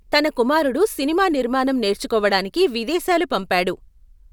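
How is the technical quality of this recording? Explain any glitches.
No technical faults are audible anywhere in the recording, so there are no glitches to explain.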